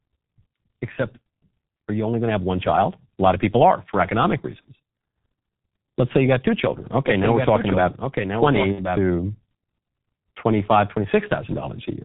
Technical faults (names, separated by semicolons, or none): G.723.1 codec; VoIP packet loss concealed by the speech codec; doubled audio track